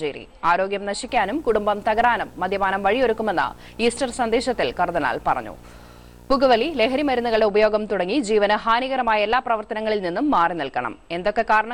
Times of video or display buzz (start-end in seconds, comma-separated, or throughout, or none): 1.08-7.41